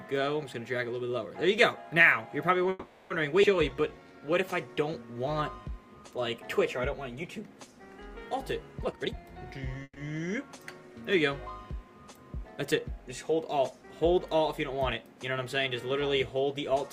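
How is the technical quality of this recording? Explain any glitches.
The recording has a cluster of network-style glitches, all typical of a call whose packet timing was unsteady.

Call audio freeze, at 2.69–3.12 s and again at 9.83–9.98 s: the first fills about 410 ms with a fading buzz or hiss, the second 130 ms ending in 40 ms of silence. Likely delayed packets draining the jitter buffer, though nothing is actually lost.

Skip ahead, 3.42–3.45 s: roughly a tenth of a second drops out and the audio jumps forward almost seamlessly, with the two sides butted together.

Jitter buffer slow-down, 3.70–4.49 s: repeated pitch periods add 114 ms, so the audio drags to 87% speed at unchanged pitch while the buffer rebuilds its reserve.

Jitter buffer speed-up, 8.82–9.83 s: short pitch-period chunks are trimmed, roughly 300 ms in total, so the audio rushes along at 132% speed, same pitch, to shrink the excess delay.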